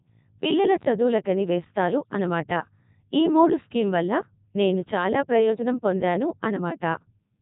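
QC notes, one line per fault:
Throughout: Codec 2 vocoder. The speech is resynthesised from sine waves using only pitch, voicing, energy and a spectral envelope, giving a heavy robotic buzz with nothing above 3.8 kHz, which fits the 3.2 kbit/s mode. Unlike a band-limited waveform codec, the original waveform's texture is gone entirely.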